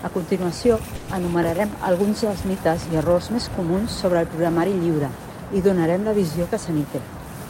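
At 0.95 s the speech stalls and the last sound is drawn out as a fading buzz or hiss until 1.21 s, about 130 ms of filler with no silence. This is a call audio freeze, likely caused by packets held up in transit so the jitter buffer ran dry and the receiver extended the final sound. When delivery resumed, speech continued where it stopped with nothing lost, but everything after now runs about 130 ms later.

From 6.37 s to 7.46 s there is a jitter buffer speed-up. The receiver, holding more audio than its target, trims short pitch-period pieces repeatedly to shed the excess. Playback runs at about 108% with the pitch unchanged, and roughly a tenth of a second is cut out over that stretch. The result is speech that sounds hurried toward the end of the clip.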